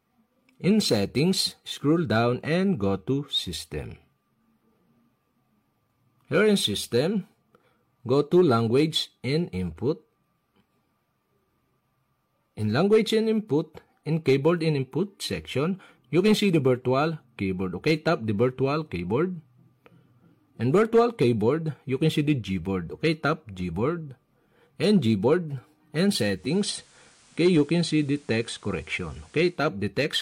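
The audio switches from 26.28 s to 29.67 s, a case of digital radio blending to analogue. The receiver loses its digital stream and cross-fades, over roughly a quarter of a second, to the station's FM broadcast, then fades back at 29.67 s. During that stretch a hiss sits around 30 dB below the signal, while loudness holds steady. The arrival of broadband hiss, and the return at the end, distinguish it from a codec simply dropping bandwidth.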